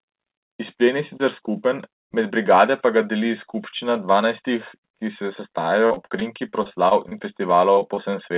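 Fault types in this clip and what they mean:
Repeated packet loss (robotic sound): gaps of up to 43 ms keep recurring from 5.86 to 7.13 s and from 7.73 to 8.15 s. Each is patched by extending the previous sound, so about a quarter of both stretches turns choppy, unlike one isolated loss's single brief smear.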